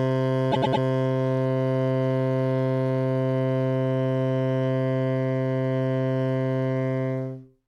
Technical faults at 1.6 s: none

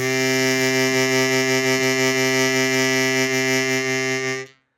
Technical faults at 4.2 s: none

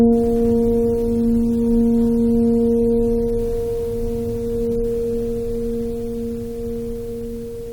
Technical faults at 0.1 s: none

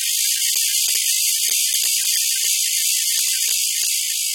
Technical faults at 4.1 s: AAC compression

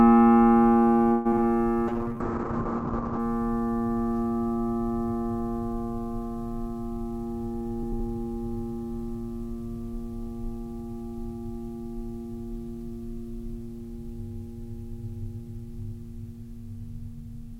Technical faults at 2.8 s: call bitrate drop

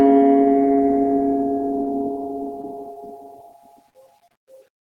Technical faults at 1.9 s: short stall from a late packet

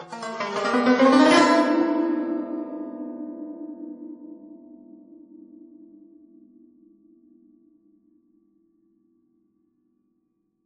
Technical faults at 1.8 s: WMA compression; loud pop

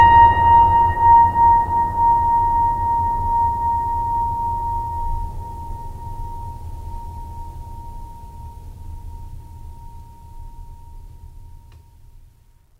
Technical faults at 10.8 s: resampler restarted on every block

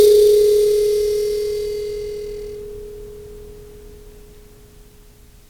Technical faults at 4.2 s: none

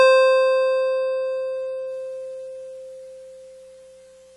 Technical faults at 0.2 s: AAC compression

